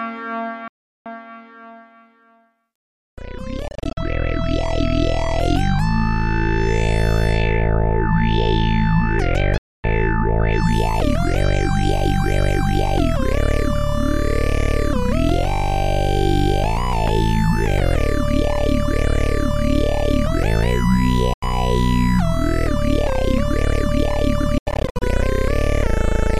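Audio packets that likely arrived too late over a Bluetooth link were discarded, causing Bluetooth dropouts at 0.68–1.06 s, 3.68–3.97 s, 9.58–9.84 s, 21.33–21.43 s and 24.58–25.02 s. Each one is a silence, and the sound resumes further along, as if it had kept playing. The dropouts at 3.7 s and 24.6 s break up into short scattered gaps, the longest about 44 ms and 87 ms, rather than one continuous hole.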